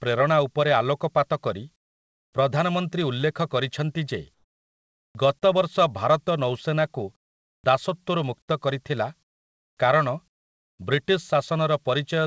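Comfort noise in place of the background first appears from 1.76 to 2.33 s, and again from 4.34 to 5.15 s. In these pauses, the sender's voice detector has likely stopped transmission, and the receiver fills the gap with steady synthetic hiss. That hiss drops the real background's texture and sits about 26 dB and then about 12 dB lower.

An onset clipped by the voice detector follows at 5.13 s. The detector likely reacted late, so roughly 20 ms of the start of "ଗତ ବର୍ଷ ଭାରତ ନୌସେନାକୁ" was never sent. The speech snaps in abruptly, without its soft attack.

The same pair recurs later. Comfort noise fills 7.16 to 7.64 s at about 18 dB down. Another 20 ms onset clip at 7.62 s makes "ଦାସତ୍ୱରୁ ମୁକ୍ତ କରିଥିଲା" start hard.

After those words, flat comfort noise replaces the background from 9.23 to 9.77 s, about 26 dB down, and from 10.28 to 10.79 s, about 24 dB down.

Throughout, the call path carries nothing above 8 kHz, which fits a wideband codec such as G.722.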